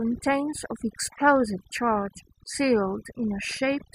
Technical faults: overdone noise removal; DAB burbling

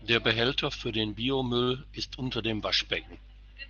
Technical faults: short stall from a late packet

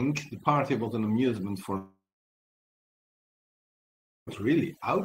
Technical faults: overdone noise removal; long network dropout

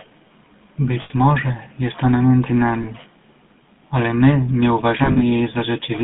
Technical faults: GSM full-rate codec; lost GSM frames

